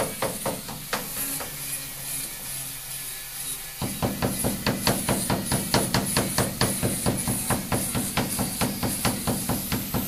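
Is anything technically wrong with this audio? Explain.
No, nothing technically wrong can be heard here.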